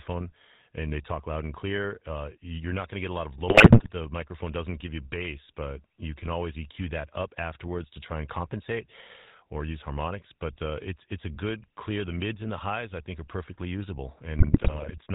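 From start to finish the speech carries the sound of the GSM full-rate codec, consistent with the original 13 kbps scheme. The codec models the vocal tract as a filter and excites it with a regularly spaced pulse train that keeps only a third of the excitation samples. Nothing above 4 kHz survives. The clip plainly shows the result: a buzzy, gravelly roughness on every voiced stretch, with dull, band-limited sibilants.

GSM bit errors then break in twice. The first runs from 3.48 to 3.90 s, just after "lot of". The second runs from 14.37 to 14.95 s. Both sound like a link flipping a few percent of the bits reaching the decoder. Corrupted filter, pitch and gain parameters distort the spectrum or spike the level frame by frame, so the speech dissolves into squawks, pops and gargling for roughly half a second each time.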